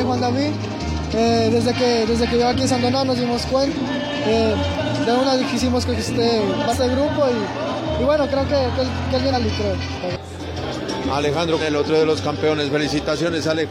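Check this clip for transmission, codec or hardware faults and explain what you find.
The clip has one fault, compressed frames skipped, occurring four times: at 3.72–3.77 s, 6.69–6.75 s, 9.29–9.34 s and 11.57–11.62 s. At each point, whole frames of the compressed stream are missing or rejected as damaged, so playback jumps ahead by around 300 ms of audio. That fits losing roughly seven frames of 46.4 ms. On a waveform, the envelope changes abruptly at each join. On a spectrogram, a brief vertical smudge appears where the spectral content jumps.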